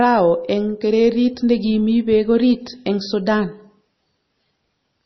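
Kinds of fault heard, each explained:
MP3 compression: The speech has nothing above 5.9 kHz, so the treble is simply gone and the result sounds dull, and the damage is heavy. That is likely an MP3 encoder starved of bits, which fits a rate of around 24 kbps. With so few bits it chops the top off at a fixed point and drops weak frequency detail frame by frame, which leaves the voice watery and swirly throughout.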